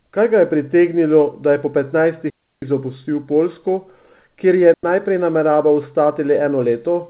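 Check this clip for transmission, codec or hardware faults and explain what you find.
Two digital wireless dropouts break the speech, at 2.3 to 2.62 s, just after "pritegnilo da je po", and at 4.74 to 4.84 s. In each, the radio link lost more data than the receiver could conceal, so it muted with a very fast fade. The result is a clean hole of near silence, about 320 ms long the first time and about 100 ms the second, with no noise burst on either side. The whole clip also stops at 4 kHz, which fits the narrowband G.711 mu-law coding of the call path.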